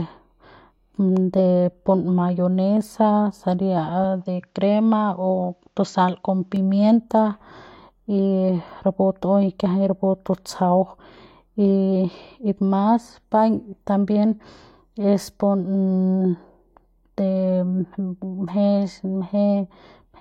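From 4.04 to 6.56 s the speech narrows and turns dull, with nothing above 7.6 kHz. That is likely an input switched to a poorer device.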